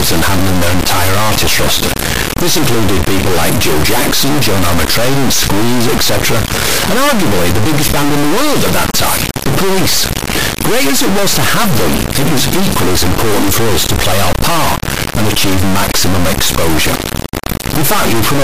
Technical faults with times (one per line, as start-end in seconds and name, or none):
0.00-18.43 integer read as float